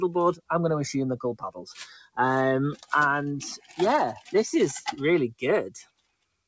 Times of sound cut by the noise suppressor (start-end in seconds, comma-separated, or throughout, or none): 1.99-2.17, 2.76-2.92, 3.57-3.79, 5.83-6.34